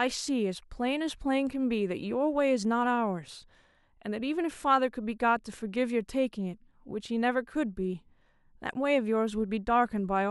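Speech recording, no audible technical faults at any point.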